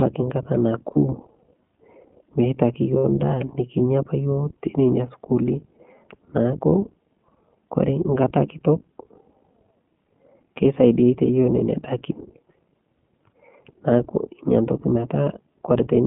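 iLBC codec damage runs through the whole speech recording: the sound is confined to roughly 150 Hz to 3.5 kHz and has a rough, synthetic edge, consistent with iLBC's 15.2 kbps mode coding each 20 ms frame independently. Lost iLBC frames appear at 0.92–0.98 s (40 ms), 2.98–3.05 s (60 ms) and 6.70–6.73 s (20 ms). In each gap the decoder repeats the last pitch cycle mixed with noise, producing a brief held, buzzy vowel that fades over the longest loss. The normal voice returns almost immediately afterwards.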